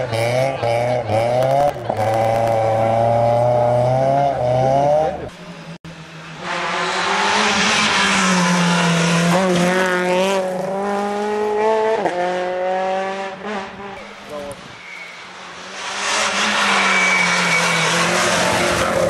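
Processor overload crackle runs from 1.2 to 2.52 s: dozens of tiny silent dropouts, each under a millisecond, where the processor missed its buffer deadlines, tearing the audio.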